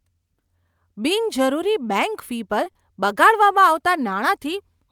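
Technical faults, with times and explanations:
2.64 to 2.68 s and 2.72 to 2.77 s, short concealed packet loss: two quick dropouts back to back, each about 20 ms of missing audio, which fits a single lost frame each time. The receiver papered over the gaps by stretching what came just before, carrying the pitch along if the speech was voiced or using shaped noise if it wasn't, over roughly 17 ms and then 30 ms, before easing back into the real signal. You hear a small smear or wobble.
3.07 to 4.81 s, call bitrate drop: the bandwidth estimate sagged and the encoder got told to go from 64 kbps down to 28 kbps, sitting at the low end for about 1.67 s. With that few bits Opus quantises more coarsely, so the speech picks up a rougher, watery texture. It lasts until the bitrate climbs back near the end.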